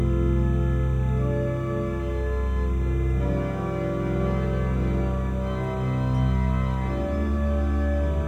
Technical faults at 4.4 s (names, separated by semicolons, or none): timecode bleed